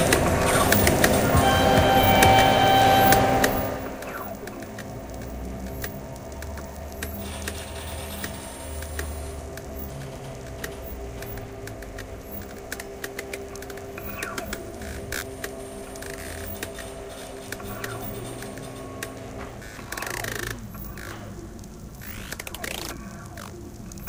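No technical faults are audible.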